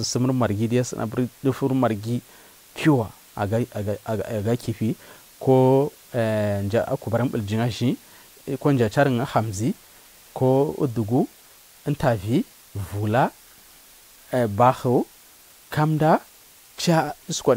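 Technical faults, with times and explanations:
Throughout, low bit depth with dither: the speech sits on a constant, even hiss roughly 30 dB down. With only 8 bits, rounding error would normally turn gritty, but dither added beforehand turns it into steady white noise, so there's no distortion, just that flat hiss.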